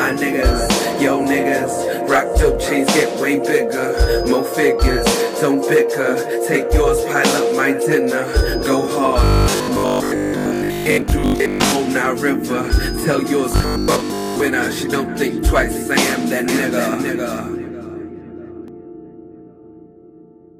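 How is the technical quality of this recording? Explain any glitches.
The recording has two kinds of glitch, in three places.

Robotic sound from repeated short buffers, from 9.24 to 11.72 s and again from 13.52 to 14.40 s. The likely cause is audio arriving too slowly, so the playback fills the gaps by looping the newest fragment while most of the real material is skipped. The loop repeats at 50 Hz, which fits a 20 ms buffer, and that rate sets a steady, metallic buzz over the sound. The buzz only loosely tracks what should be there.

Doubled audio track, from 16.48 to 18.68 s. The likely cause is the same signal being mixed in a second time, either through a slower capture path or an edit that left two misaligned copies. A full-range duplicate trails by roughly half a second and sits a few decibels below the original. It has no decay or room colour of its own. It switches on and off abruptly at both ends.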